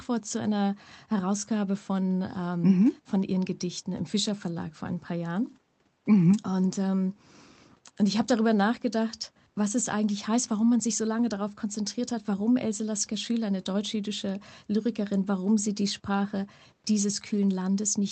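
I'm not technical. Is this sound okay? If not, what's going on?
Yes, nothing is going wrong with this speech recording. A faint room background sits well beneath the speech, and because the audio came through a call connection it tops out around 8 kHz, which is normal for a call.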